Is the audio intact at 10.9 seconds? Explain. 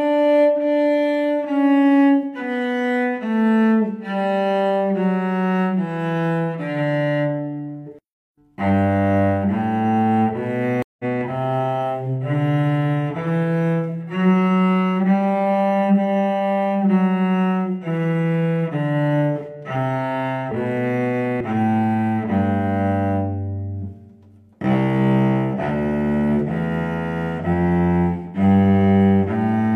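No. A stream reconnect runs from 10.82 to 11.05 s: the connection dropped and the player restarted its decoder mid-stream. About 0.17 s of silence follows, then the audio fades back in roughly 150 ms further along, skipping that stretch.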